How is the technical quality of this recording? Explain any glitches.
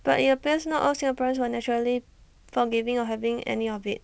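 No glitches to report; the speech comes over a wideband call path with nothing above 8 kHz, and nothing in it sounds faulty.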